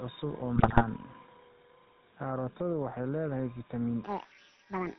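Right from the start, the whole clip has that GSM full-rate codec sound. It's band-limited to nothing above 4 kHz and has the buzzy, gravelly roughness you get when a vocal-tract model is driven by a coarse pulse train. It fits the 13 kbps full-rate coder, and the damage is plainly audible rather than something you have to listen for.

Throughout, there's also gain pumping, with the level swinging by around 10 dB. The room noise sits about 36 dB under the speech. Loud and quiet stretches end up squashed together. The likely cause is input gain set far too hot, with a fast limiter or compressor clamping down on each peak and releasing in the gaps.

From 0.56 to 0.83 s come the GSM bit errors. For about a quarter of a second the decoder is fed corrupted parameters, so the spectral shape bends and the level jumps around frame by frame. You hear squawks, pops and a gargling break-up. The damage is spread across that whole stretch, which points to a run of around a dozen hit frames from a few percent of flipped bits on a weak link.

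Finally, right after "waxay leedahay" at 4.04 s and running to the end, there's a section at the wrong speed. It plays about 1.57 times too fast, so pitch and tempo jump up together by about seven semitones. The result sounds chipmunky and rushed. Most likely that tail was played or resampled against the wrong clock.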